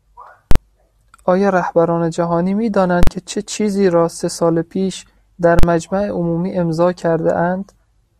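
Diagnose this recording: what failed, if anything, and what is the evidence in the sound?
Three loud bangs cut through the speech, at 0.51, 3.03 and 5.59 s, each lasting about 43 ms. Each one is a slam to one extreme: a sharp pop as the signal jumps to a flat value far beyond the speech peaks, nothing audible while it is held there, and a second pop as it drops back. This is invalid numbers at full scale in the processing or buffer stage. A calculation produced infinite or invalid values, which were clamped to the largest sample value for a whole block. The length fits a 2048-sample block.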